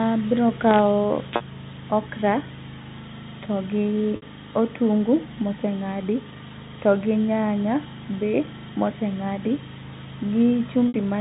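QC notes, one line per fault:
1.36–1.40 s, 4.16–4.22 s and 10.88–10.94 s: packet loss with pitch repetition. Gaps of 40, 60 and 60 ms went missing and the receiver filled each by looping the last pitch period, so the speech briefly holds on a slightly buzzy, frozen tone before resuming.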